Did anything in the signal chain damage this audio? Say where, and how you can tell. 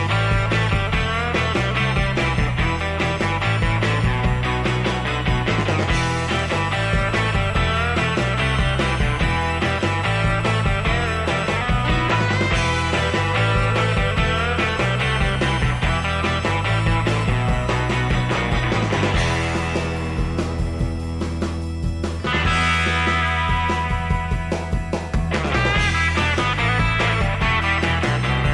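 No, the signal arrives with no audible damage from any stage of the chain.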